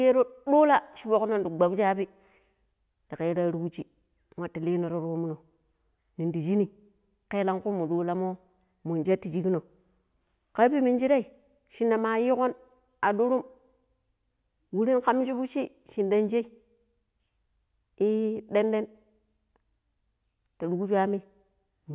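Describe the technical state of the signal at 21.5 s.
At 21.5 s the signal is intact, with no audible fault at that moment.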